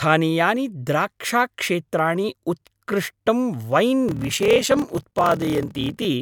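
From 4.06 s to 6.07 s the speech carries a block size mismatch (padded). One stage hands over shorter blocks than the next reads, which fits 1024 written samples in a larger read block, and the remainder is zero-filled. A short silence lands in every block, giving a 38.3 Hz buzz, and the speech runs at 0.889 times normal speed with pitch about unchanged. A waveform shows evenly spaced flat gaps; a spectrogram shows regular vertical dropout stripes.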